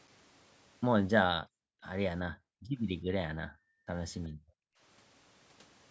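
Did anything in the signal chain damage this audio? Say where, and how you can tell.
Yes. Background gated by the echo canceller, in the call processing stage, at 1.46 to 1.84 s, 2.33 to 2.74 s, 3.47 to 3.89 s and 4.29 to 4.8 s. Each time the room sound sinks by up to about 40 dB for roughly 0.4 to 0.5 s, then returns. The canceller hears far-end audio on the loudspeaker and clamps the microphone hard, so the ambience vanishes with it.

Echo leak, also in call processing, at 4.24 to 4.28 s: a very faint copy of the speech, about 35 dB down, arrives 371 ms after the original. It is a brief scrap that ends just as the next gating dip begins. The likely cause is a loudspeaker on one side of the call whose echo canceller left a residue of the returned signal. The call's microphone filtering is also present, with nothing above 8 kHz.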